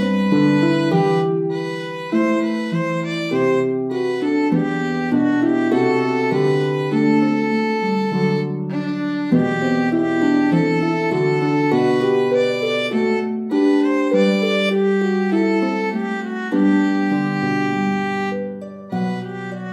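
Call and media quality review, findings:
No audible defects found on review; nothing to escalate.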